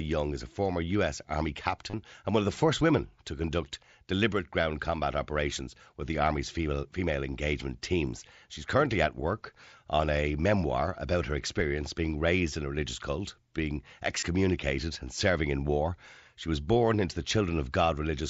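At 1.90 to 1.93 s, just before "and one of the", and at 14.20 to 14.23 s, after "a religious cult being", concealed Bluetooth headset packet loss: about 30 ms and 22 ms of dropped mSBC packets were patched with repeated recent waveform, giving a brief buzzy hold and slight warble on resumption.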